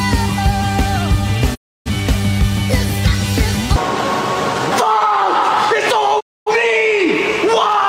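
At 1.54 s the sound quickly fades to silence and comes back at 1.89 s; at 6.19 s it happens again, returning at 6.51 s. That's a digital broadcast dropout: the receiver muted on bad frames, with roughly 20 ms fades, and whatever aired during each hole is simply gone.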